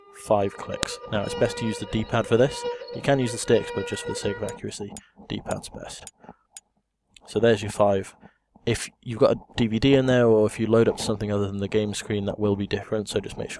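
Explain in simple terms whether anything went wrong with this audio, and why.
Something did go wrong: a single sharp snap at 0.83 s is a file header played as audio. Two pieces were joined without stripping the second one's header, so its header bytes sounded as a click. Unlike a dropout, nothing goes missing; it's an added click.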